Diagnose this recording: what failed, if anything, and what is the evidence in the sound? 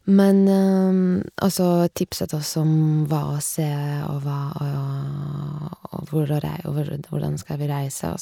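Nothing failed: no stage from capture through playback leaves an audible mark on this speech recording, so there is no fault evidence to cite.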